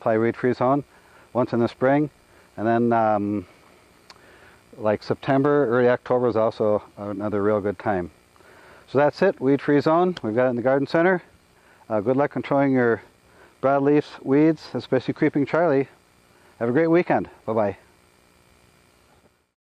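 No technical faults are audible.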